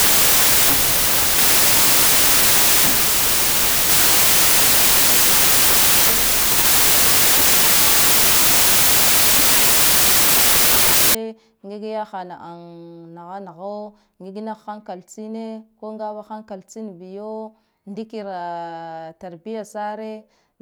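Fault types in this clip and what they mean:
Wrong sample width: From the start to about 11.1 s, the speech sits under loud, harsh noise and plays about 1.33 times too fast and high. That fits packed 24-bit data read as 32-bit samples, so each value mixes bytes from neighbouring samples and only some keep the real signal's top bits. A plain sample-rate mismatch would shift speed and pitch just as cleanly but leave no noise.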